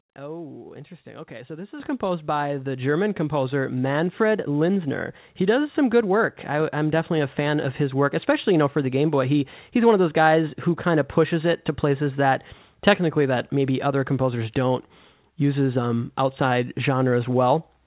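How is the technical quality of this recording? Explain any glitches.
The main glitch is a sudden jump in loudness early on, and the whole recording carries the narrow, band-limited sound of a telephone-grade call path.

At 1.8 s the speech and the room background jump up together by about 10 dB in a single step. This is a microphone volume stepped up event: the call software judged the input too quiet and raised the device's input level all at once rather than gradually.

Throughout, nothing is heard above 4 kHz, which fits G.711 mu-law coding at 64 kbps on a WebRTC call path, giving the speech its narrowband phone-line character.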